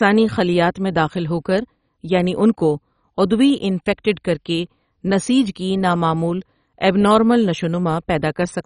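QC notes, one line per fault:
Throughout: likely MP2 compression, heavily starved of bits, which fits about 32 kbps, switches off upper sub-bands, leaving speech dull, gurgling and granular, with nothing above 10.4 kHz.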